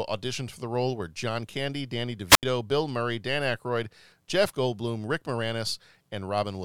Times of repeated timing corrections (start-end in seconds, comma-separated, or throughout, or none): none